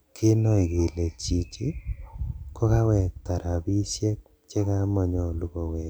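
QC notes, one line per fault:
No faults found in this speech clip. Nothing here needs a QC entry.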